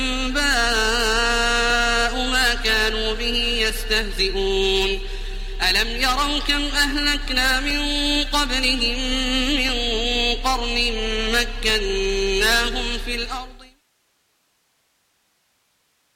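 Periodic USB or driver dropouts run through the audio. A short tick recurs every 2.0 s, from about 1.70 s to 15.71 s. Each one is a brief gap of roughly a millisecond, filled with silence. The even spacing points to a background task that stalls the USB bus or audio driver on a fixed schedule. The ticks are heard only while signal is present. A smooth fade-out runs from around 13 s to 13.84 s.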